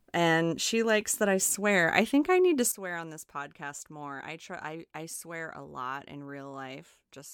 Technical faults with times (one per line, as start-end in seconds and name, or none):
2.72-7.33 sudden gain jump